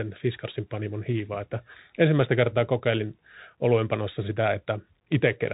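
From start to finish the speech passes through a Bluetooth CVSD headset codec, and the damage is plainly audible. Nothing survives above about 3.8 kHz, which narrows the sound to headset bandwidth. What separates it from a plain band limit or a telephone codec is the one-bit slope tracking, which fits a 64 kbps CVSD link. Its adaptive step lags behind loud high energy, so s sounds turn scratchy. A granular hiss sits beneath the speech.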